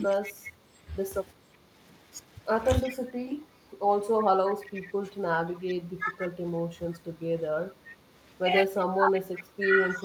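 The speech dips in pieces from 0.0 to 1.49 s (deepest about 30 dB, roughly 0.7 s in all), then 2.85 to 3.79 s, 5.04 to 7.44 s (both about 20 dB) and from 8.97 s to the end (about 15 dB). This is speech suppressed in double talk. The likely cause is an echo canceller that could not separate this talker from loudspeaker echo while both sides spoke, so it turned everything down.

Overlapping this, an echo leak adds a copy 357 ms late at 0.25 to 0.53 s, 2.86 to 2.94 s, 4.5 to 5.74 s and 7.89 s onward, about 10 to 20 dB below the speech. Residue likely slipped past the loudspeaker side's canceller. Suppression takes sound away, while the leak adds a delayed repeat.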